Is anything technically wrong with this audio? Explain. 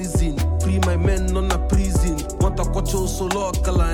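Yes. A resampler restarted on every block runs from 0.25 s to the end. Each 250 ms block was converted on its own, so the filter at every block edge lacked the real neighbouring samples and worked from silence or from the block's far end instead. That leaves a small discontinuity at each boundary, heard as a steady train of ticks at 4 Hz. The conversion sounds consistent with a 44.1 kHz to 48 kHz change.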